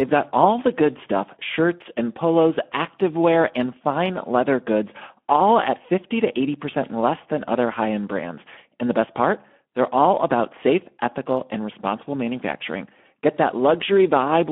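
Speex codec damage runs throughout: the speech sounds hoarse and noisy, fitting an 11 kbps stream, with a spectrogram showing smeared harmonics confined to 200 Hz–3.4 kHz.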